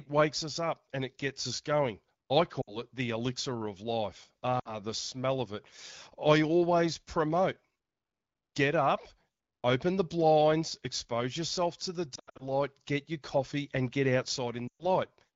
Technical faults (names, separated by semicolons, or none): lost AMR speech frames